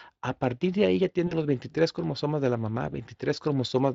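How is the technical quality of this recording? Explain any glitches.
There is one glitch, a short dropout in the speech handled by the codec's own repair. The audio carries the mild coarseness of a Speex-coded line, and its light codec texture points to a fairly high rate of roughly 28 kbps.

From 1.27 to 1.33 s there is VoIP packet loss concealed by the speech codec. About 40 ms of audio went missing, which fits two 20 ms frames. The decoder filled the gap by extending the last pitch and vocal-tract shape it had, reducing the level with each frame. This produces a brief stretched-out sound that fades, and the speech stays weak for a moment afterward while the decoder's state recovers.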